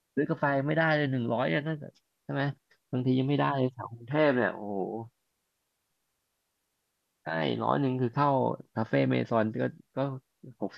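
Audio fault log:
No faults detected in this speech recording.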